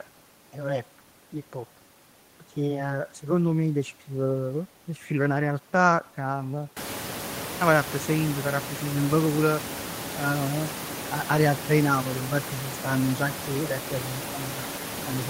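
Nothing technically wrong can be heard in this speech recording. The room's own background noise comes up by about 21 dB around seven seconds in and then sits roughly 12 dB below the speech, which is part of the recording rather than a system fault.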